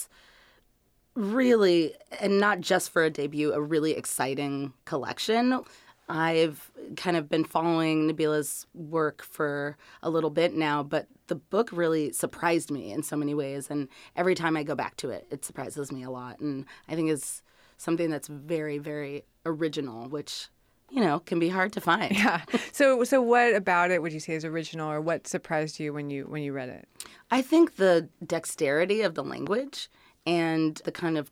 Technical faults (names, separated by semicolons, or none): loud pop